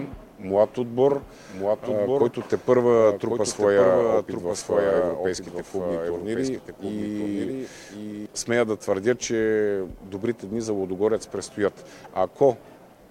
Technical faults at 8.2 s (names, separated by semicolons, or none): doubled audio track